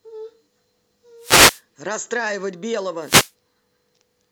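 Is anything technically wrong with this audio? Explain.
Yes. Wireless microphone noise hits occur at 1.19 to 1.62 s and 3.01 to 3.32 s. Reflections briefly cancel the FM radio signal, so receiver noise rises over the speech, heard as a short swish or burst of static.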